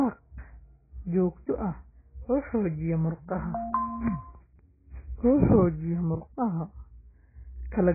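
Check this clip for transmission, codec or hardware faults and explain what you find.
The speech carries one fault that runs through the whole recording: heavy AAC compression damage.

Throughout, the speech is dull and smeared, with nothing above 2.5 kHz. The likely cause is an AAC-LC encode starved of bits, which fits a bitrate around 12 kbps, so the encoder lowers its cut-off and coarsely quantises what remains. Unlike a simple low-pass filter, this also leaves a warbling, fizzy texture on sustained sounds and sibilants.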